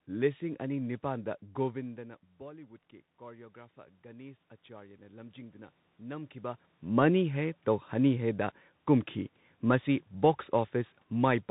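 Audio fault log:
throughout, Bluetooth CVSD headset codec: nothing above 4 kHz survives, s sounds turn scratchy and granular hiss sits underneath; a spectrogram shows a hard ceiling at 4 kHz with grainy fill.
1.95 to 6.68 s, automatic gain rising: the input dropped by about 19 dB and gain climbed about 9 dB gradually, ending before "ꯃꯅꯤ ꯍꯦ"; the waveform envelope and noise floor swell together.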